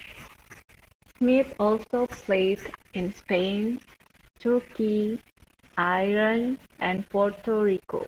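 From start to finish the speech sounds muffled, hoarse and faintly robotic. This is Opus voice compression at a low rate, consistent with about 16 kbps in hybrid mode: the excitation is coded coarsely, and a CELT layer carries the band above 8 kHz.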